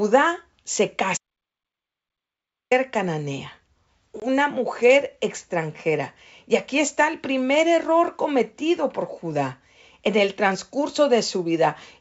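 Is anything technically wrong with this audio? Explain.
Yes, there are two faults. From 1.17 to 2.71 s there is an audio dropout to silence. The input was likely lost, through a disconnected device, a failed link or a stray mute, while recording carried on writing silence. The speech cuts out mid-flow for about 1.5 s, with no room tone in the gap, and whatever was said then is gone.

At 4.20 to 4.22 s, just before "mujer extranjera", there is packet loss on an ADPCM call. About one packet, roughly 20 ms of audio, was dropped and filled with silence. That leaves a hard-edged hole. Afterwards the decoder's adaptive predictor and step size are out of step with the sender's, so the speech that follows comes back distorted until the decoder re-tracks. The G.722 wideband coding at 64 kbit/s shows no codec damage or only faint damage.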